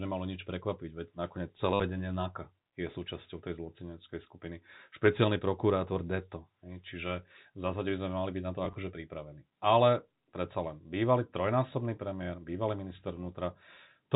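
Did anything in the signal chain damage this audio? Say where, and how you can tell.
Yes, the damage is in the network stage: packet loss with the last packet repeated. From 1.74 to 1.8 s, about 60 ms of audio is lost, and the receiver keeps replaying one short packet. That gives a robotic stutter and a buzz near 100 Hz, which fits 10 ms packets. At 8.65 to 8.75 s, gaps totalling 50 ms are scattered over 100 ms, with runs no longer than 20 ms. The G.711 telephone coding behind it keeps the sound band-limited below 4 kHz.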